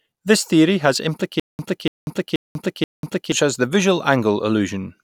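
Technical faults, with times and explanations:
1.40–3.32 s, stutter with silent gaps: a 288 ms speech fragment repeats four times, each followed by 193 ms of digital silence, likely a stalled stream replaying its last buffer.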